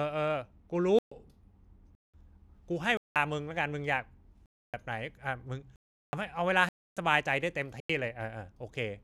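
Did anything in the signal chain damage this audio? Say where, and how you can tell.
Yes. The speech drops abruptly into blocks of digital silence at 0.99, 1.95, 2.97, 4.46, 5.76, 6.69 and 7.80 s, lasting 0.09 to 0.37 s. Most gap lengths fit whole multiples of a 4096-sample buffer, pointing to the driver or buffer stage failing to fill the output in time.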